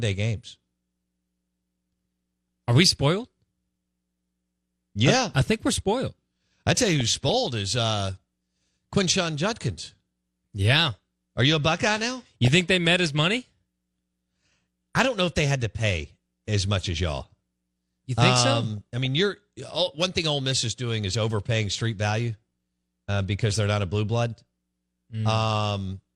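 Across the whole speech clip the sound is dull and plainly granular, with an audible gurgle. This is MP2 compression, likely at a low rate of around 80 kbps. MPEG Layer II divides the spectrum into 32 sub-bands and shares out bits among them. At this rate the upper bands are starved and drop in and out, and the remaining bands are quantised coarsely. That accounts for the missing top end and the grainy texture.

DAB burbling appears three times. From 6.91 to 7.34 s, after "we're spoiled I tell" and before "is uh", a burbling disturbance sits over the speech. Similar bursts follow from 12.10 to 12.61 s, just before "they met his money", and from 18.77 to 19.06 s, just before "you're one thing". Each burst points to a run of corrupted audio frames, with bit errors in the region of 0.15 to 0.2 percent getting past error correction. Damaged samples put short blips of noise into single sub-bands and damaged scale factors make individual sub-bands jump in level for up to a frame, which produces the burbling.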